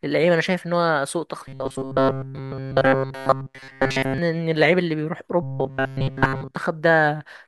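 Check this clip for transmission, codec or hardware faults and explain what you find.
The speech has a robotic sound from repeated short buffers, from 1.48 to 4.18 s and again from 5.43 to 6.56 s. Throughout both stretches the voice becomes a fixed, metallic buzz near 134 Hz that still traces the speech's rough shape. The likely cause is audio arriving too seldom, so that essentially all of the signal is replaced by a loop of about 7.5 ms whose repetition sets that pitch. Because each repeat is so short, it fuses into a steady tone rather than audible stuttered fragments.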